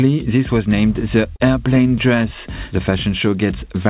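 At 1.36 s there is a short concealed packet loss: about 40 ms never arrived, and the receiver filled 37 ms by extending the preceding sound. It is heard as a brief smear or wobble. On a spectrogram, already empty above 4 kHz from the call path, the harmonics or noise stretch smoothly across the gap. The waveform shows a repeated, slightly fading stretch.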